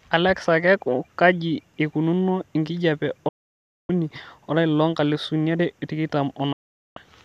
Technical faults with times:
3.28-3.90 digital broadcast dropout
6.52-6.97 digital broadcast dropout

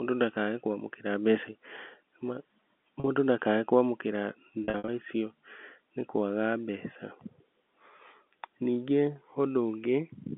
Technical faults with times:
3.00-3.04 packet loss with pitch repetition
4.64-4.88 packet loss with pitch repetition

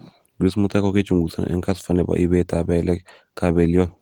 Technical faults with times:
none

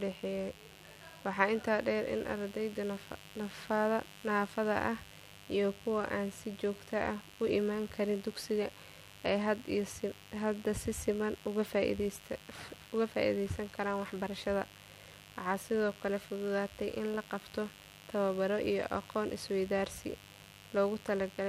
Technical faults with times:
0.00-21.49 mains buzz

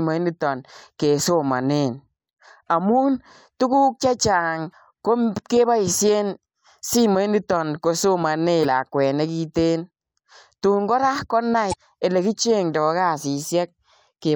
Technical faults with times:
8.61-8.65 damaged data in a compressed stream
11.69-11.74 damaged data in a compressed stream

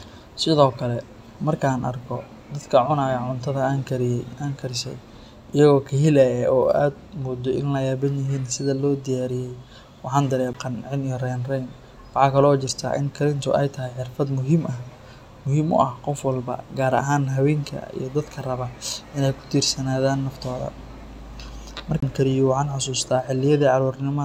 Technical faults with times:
10.53 CD skip
22.00-22.02 CD skip

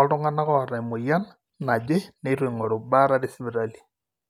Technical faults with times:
none

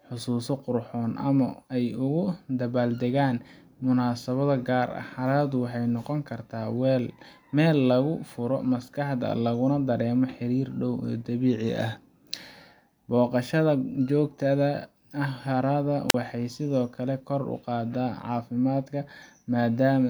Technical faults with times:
16.09-16.14 wireless microphone squelch dropout

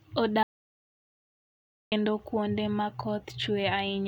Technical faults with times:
0.43-1.92 audio dropout to silence

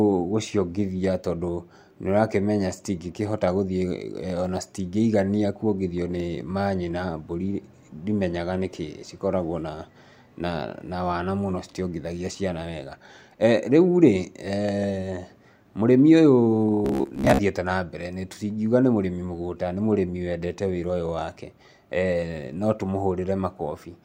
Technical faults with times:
16.85-17.40 robotic sound from repeated short buffers

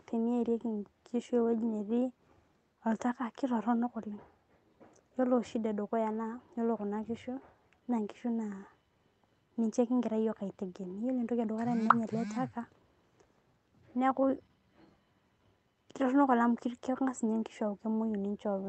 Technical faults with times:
none

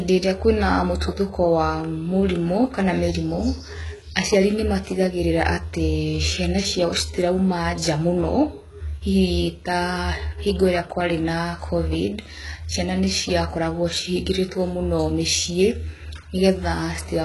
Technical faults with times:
0.00-17.25 HE-AAC compression

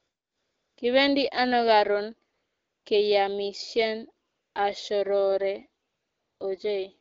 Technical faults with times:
0.00-0.77 AMR comfort noise
2.33-2.85 AMR comfort noise
4.29-4.55 AMR comfort noise
5.87-6.39 AMR comfort noise

